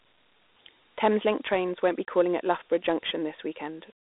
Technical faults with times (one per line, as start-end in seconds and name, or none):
0.00-4.10 Dialogic VOX ADPCM